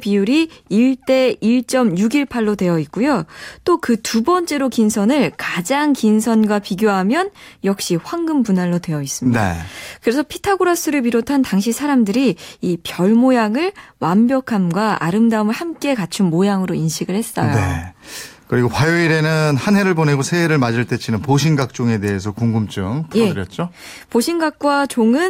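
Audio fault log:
Nothing to log here: I listened all the way through this speech recording and didn't catch a single fault.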